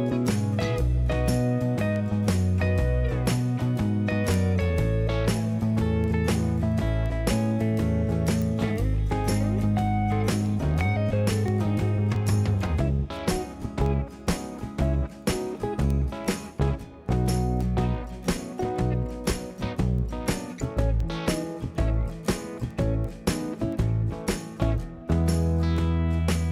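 The audio carries word clock ticks from 0.26 s to 26.45 s, roughly seventy sharp ticks about every 0.3 s, consistent with an unlocked receiver clock about 70 ppm off, slipping one sample each time.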